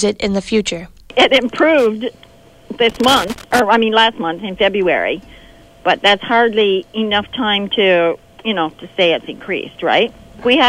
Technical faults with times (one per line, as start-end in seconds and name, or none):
2.89-3.59 loose connector crackle